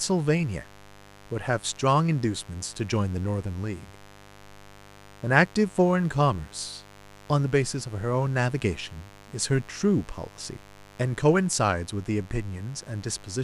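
Speech carrying a steady, raspy mains buzz throughout, built on 50 Hz harmonics reaching into the kilohertz range, roughly 25 dB below the signal, from switching spikes leaking in.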